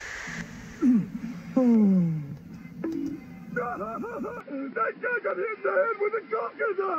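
At 4.41 s the sound abruptly narrows and turns duller, staying that way to the end, with no gap at the change and about the same loudness. Nothing above 5.3 kHz survives, and a faint new background noise sits far below the signal. This is likely an input switched to a poorer device, whose narrower band cuts the top. On a spectrogram the upper energy ends in a flat ceiling from 4.41 s; the waveform shows no break.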